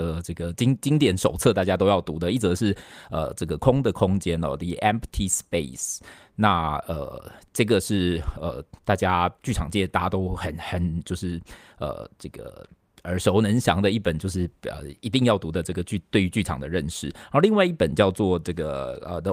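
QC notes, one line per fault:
No faults heard anywhere in the speech audio.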